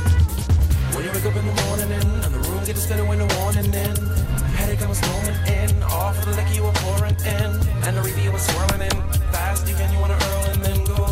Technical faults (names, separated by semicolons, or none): none